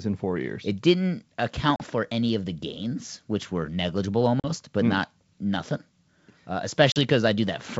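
Three short holes from packet loss on the ADPCM call: 1.76 to 1.84 s just before "for any of the", 4.40 to 4.50 s between "gains which were negligible" and "but mm not nothing", and 6.92 to 6.98 s. Each drops about 40 ms, a couple of packets' worth, into hard-edged silence. The decoder's predictor and step size lose sync with the sender's, so the speech comes back slightly distorted before settling.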